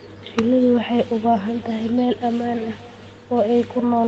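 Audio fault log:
Throughout: echo with no canceller, the speech returns about 21 dB down after roughly 0.4 s, a thinner copy from the far loudspeaker re-entering its microphone unremoved.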